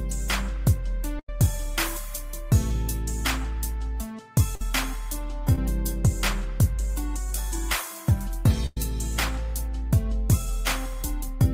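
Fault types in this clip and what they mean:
Burst of packet loss: three places, at 1.19 to 1.29 s, 4.55 to 4.61 s and 8.66 to 8.77 s, where the sound freezes into a held buzz or fading hiss and then picks up further along, with a stretch skipped. A run of packets arrived too late or not at all, so the receiver stretched the last sound across roughly 88, 52 and 103 ms, dimming it as it went, while about 90, 50 and 110 ms of audio went missing.
Short concealed packet loss: a quick smear at 5.55 s, lasting about 16 ms, where a sliver of sound seems blurred rather than cut. Around 10 ms of audio never reached the decoder in time, and the receiver papered over the hole by extending what came just before, then blended back into the real signal, so the gap is hidden but leaves a wobble.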